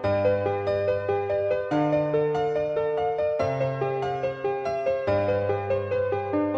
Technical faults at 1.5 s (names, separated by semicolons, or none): none